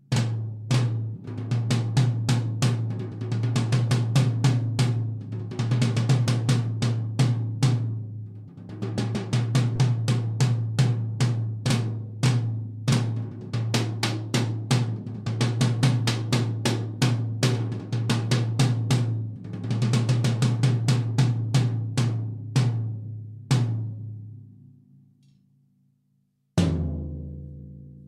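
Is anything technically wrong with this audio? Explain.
Yes. From 9.75 to 9.79 s there is a corrupt frame decoded. Damaged bits in what sounds like a few consecutive compressed frames were played rather than rejected, so misread gains and codes scattered energy into the wrong frequencies. The result is a brief squeaky, noisy blip, peaking around -20 dBFS, lasting as long as the bad frames. Unlike a click or a dropout, it has tonal, smeared spectral content rather than a sharp impulse or silence.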